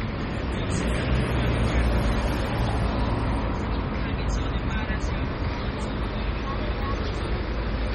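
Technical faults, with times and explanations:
Throughout, MP3 compression. Nothing is heard above about 15.7 kHz, where the treble stops abruptly. Heavy damage runs through the whole sound. Quiet detail flickers in and out, giving a watery, swirling texture. Sharp onsets are smeared and bright transients chirp metallically. The likely cause is an MP3 encoder starved of bits, which fits a very low rate near 32 kbps. It drops weak frequency lines frame by frame and cuts the top band.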